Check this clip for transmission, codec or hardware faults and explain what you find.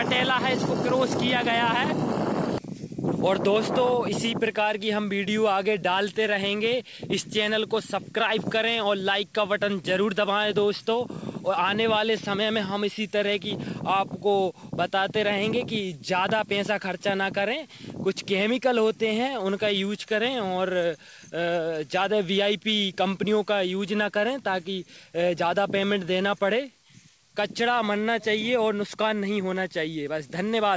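Nothing stood out on listening; the audio carries the expected character of a wideband call path, with its content stopping at about 8 kHz.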